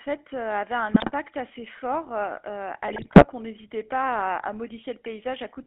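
Throughout the clip, the speech carries the GSM full-rate codec's buzzy, gravelly roughness, and the damage is plainly audible. The coder rebuilds the voice from a vocal-tract filter driven by a regularly spaced pulse excitation, and the sound fits the 13 kbps full-rate coder heard over a phone line band of 250 Hz to 3.4 kHz. On a spectrogram, energy stops sharply above 3.4 kHz and thins out below 250 Hz, and the harmonics look coarse and grainy rather than clean.

From 0.94 to 1.12 s, just before "assez fort", GSM bit errors break the speech into squawking, popping or gargling sounds. Corrupted filter, pitch or gain values reached the decoder for the length of the bad patch, either bending the spectrum or pushing the level up, frame after frame. The same happens in a longer burst from 2.88 to 3.25 s, right before "on n'hésitait pas à". On a spectrogram, each burst shows as blocky, smeared energy in chunks about one frame wide. 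In the waveform, it shows as irregular level jumps.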